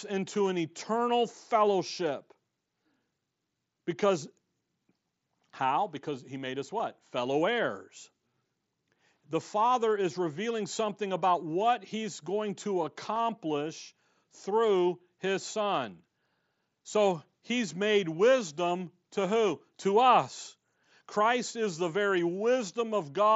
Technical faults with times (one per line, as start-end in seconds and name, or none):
6.79 concealed Bluetooth headset packet loss
13.15 concealed Bluetooth headset packet loss